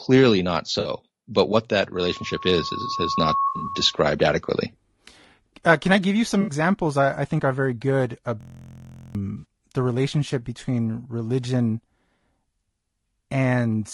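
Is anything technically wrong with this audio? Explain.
Yes. Throughout, the speech sounds rough and grainy, with noise between the harmonics and a dull, synthetic top band, likely from low-delay AAC compression (AAC-ELD) at a bitrate around 32 kbps.

AAC frame loss with concealment causes brief smeared, phasey patches at 0.79–0.89 s just before "but what that", at 6.41–6.51 s and at 9.37–9.45 s, each about 60 ms of lost audio. A longer, broken-up patch runs from 3.47 to 3.72 s, about 140 ms lost across 200 ms, the longest gap around 70 ms. In each, the decoder patched the missing frames from the last good spectrum.

From 1.94 to 4.08 s, after "but what that", a loudspeaker feedback squeal swells at 1.1 kHz over roughly one and a half seconds to about 5 dB above the speech. A microphone was picking up its own loudspeaker, and the loop gain at that frequency exceeded one.

From 8.41 to 9.15 s, between "think are very good" and "the relationship between religion", a steady 43.1 Hz buzz replaces roughly 0.7 s of speech. 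This is a system hang loop: one 23.22 ms chunk repeats about thirty times while the sound hardware cycles its ring buffer, which fits a 1024-sample buffer.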